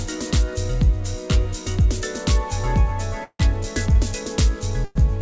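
At 3.24 s the sound stretches into a fading buzz or hiss for about 150 ms, the last 60 ms silent, and at 4.85 s a similar 110 ms fill occurs. These call audio freezes likely come from delayed packets draining the jitter buffer. Nothing is lost; playback resumes late.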